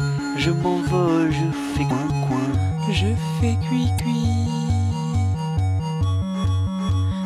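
Damaged data in a compressed stream hits the music twice, from 1.87 to 1.91 s and again from 3.96 to 4.00 s. Corrupted bytes make the decoder misread those frames and lose sync until it finds the next valid frame header, leaving a brief chirp, squawk, click or short hole each time.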